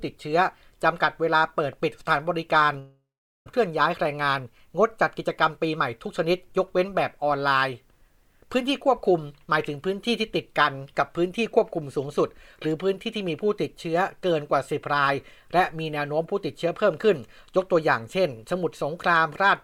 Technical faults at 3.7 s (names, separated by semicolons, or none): jitter buffer speed-up